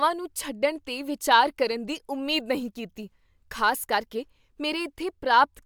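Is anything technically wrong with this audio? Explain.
No, nothing technically wrong can be heard here.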